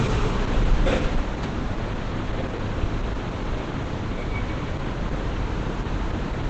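Throughout, the audio sounds muffled and hoarse, with nothing above 8.7 kHz, which points to heavy Opus compression, likely in its wideband speech mode near 12 kbps.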